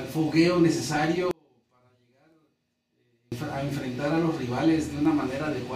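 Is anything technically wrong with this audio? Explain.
Yes. From 1.31 to 3.32 s the sound drops by about 36 dB and turns faint, likely one channel inverted, cancelling the shared content when summed to mono.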